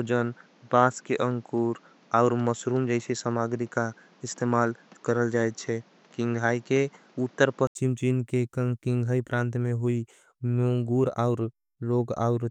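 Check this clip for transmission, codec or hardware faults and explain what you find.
One fault here. From 0.0 to 7.75 s the speech is band-limited, nothing above 7.7 kHz, with extra background noise about 30 dB down, likely an input switched to a poorer device. At 7.75 s there's an 80 ms gap, then fuller, clearer sound at roughly the same level.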